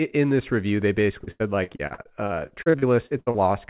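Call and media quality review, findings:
Repeated packet loss (robotic sound), 1.24–3.37 s, speech choppy with pieces missing. Probable component: jitter buffer/concealment on the G.711 call path (band ends at 4 kHz). Fifteen gaps, longest 86 ms, about 30% of span concealed. Spectrogram: smeared, stretched harmonic blocks and hard onsets. Waveform: repeated cycles and abrupt resumptions.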